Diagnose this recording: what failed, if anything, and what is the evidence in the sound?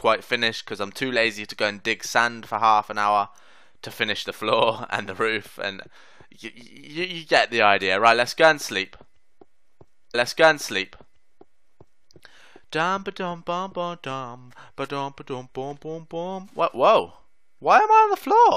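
A stream segment repeated from 10.14 to 12.13 s: about 2.0 s of audio plays a second time after a small blip at the jump back, a network or playback fault where the player queued the same segment twice.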